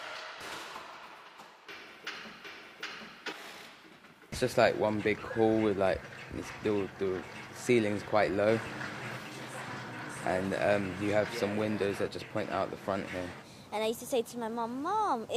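No technical faults are audible.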